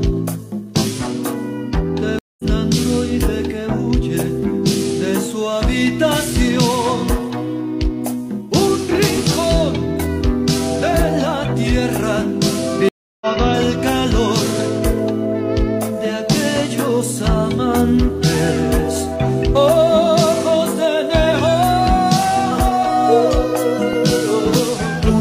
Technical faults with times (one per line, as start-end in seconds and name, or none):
2.19-2.44 stream reconnect
12.89-13.27 stream reconnect